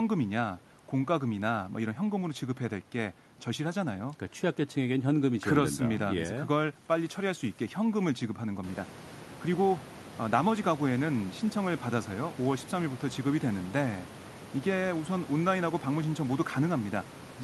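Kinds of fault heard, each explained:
No technical faults are present: the background noise in the room steps up by about 13 dB partway through but stays about 18 dB below the speech, and the call codec carries the audio up to 12 kHz.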